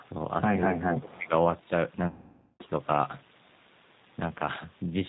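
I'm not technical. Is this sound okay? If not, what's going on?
No, it has a few problems. The whole clip went through the G.729 codec, a heavily squeezed phone-call format. It rebuilds the speech from a rough model of the voice, so everything sounds a bit rough, synthetic and muffled, with no crisp top end.

Right at the start, from 0.00 to 0.05 s, there's a faint scrap of sound arriving about 0.23 s late. That's likely an echo leak: someone's loudspeaker sound got back into their microphone and the echo canceller didn't fully catch it.

From 0.95 to 1.32 s the voice suddenly drops way down, nearly disappearing for about four tenths of a second. That's likely speech suppressed in double talk: both sides spoke at once, and the echo canceller turned everything down because it couldn't tell them apart.

From 2.08 to 2.63 s about half a second of audio went missing, which is VoIP packet loss concealed by the speech codec. 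The decoder guessed from the last bit it had, so you hear a stretched sound that fades out, and the voice stays a bit weak just after.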